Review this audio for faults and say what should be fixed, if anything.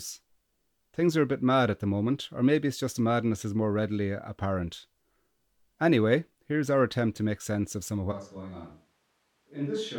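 At 8.13 s, after "sense of some of", the speech suddenly turns hollow and roomy, about 10 dB quieter and noisier until the end, likely a switch to a distant microphone. Check the close mic's feed before recording.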